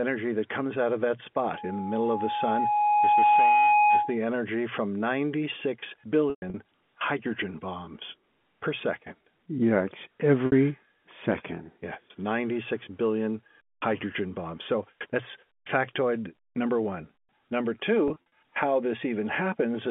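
From 1.54 to 4.18 s, just after "comes out of that", a loudspeaker feedback squeal takes over. The microphone hears its own loudspeaker, and the loop runs away at 835 Hz. The tone swells over about two seconds and ends up somewhat louder than the speech. It stops before "energy from".

Packet loss with pitch repetition follows, at 6.30, 10.46 and 18.08 s. The receiver fills each gap by repeating the last pitch period, which gives a brief buzzy, held sound. At 6.30 s, 160 ms is lost over 240 ms, with a 120 ms run that fades toward silence before "hydrogen bombs per second". At 10.46 s, 60 ms is lost. At 18.08 s, 120 ms is lost in short bursts.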